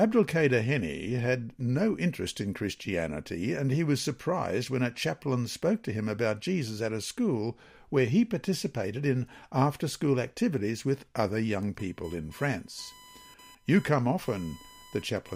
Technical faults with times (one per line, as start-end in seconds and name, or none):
11.79-15.36 computer activity noise